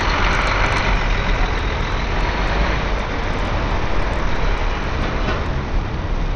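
A recording of everyday sounds, about 6 s long, that sounds dull and gritty from start to finish. Nothing reaches above about 9.6 kHz, so the treble is simply missing, and a coarse, grainy noise clings to everything left below it. This is likely Bluetooth SBC compression. That codec splits the signal into a few wide sub-bands and hands out bits without modelling hearing. At a squeezed rate, which here fits roughly 80 kbps, the top bands get nothing and the rest are crudely quantised.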